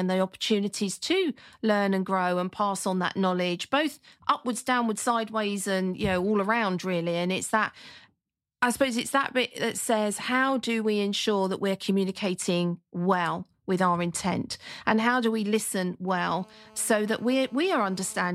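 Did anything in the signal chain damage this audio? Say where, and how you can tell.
Yes. GSM phone buzz enters the analogue wiring from 16.08 to 18.30 s, right after "how do we listen": a steady, raspy 217 Hz buzz rich in harmonics, about 28 dB below the speech. A nearby 2G phone on a call pulses its transmitter, and the audio circuit rectifies those bursts.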